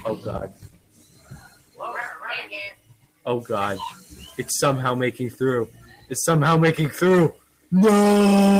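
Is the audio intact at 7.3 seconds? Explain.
No, not really. From 7.32 to 7.72 s there's a clear case of sound cut by the noise suppressor. The suppressor decided this stretch was noise and pulled it down harder than what's around it, by about 16 dB at its deepest. So for roughly 0.4 s the sound sinks, with anything sustained or decaying getting squashed or clipped short rather than ringing out naturally.

That dip sits on top of a bigger problem running through the whole clip: a speech-tuned noise suppressor applied to music or sounds, left switched on. It keeps treating steady tones, ambience and tails as noise, so the gain swings around by something like 15 dB. You hear it as pumping and fluttering. Onsets mostly punch through, while held material and reverb sink and thin out behind them.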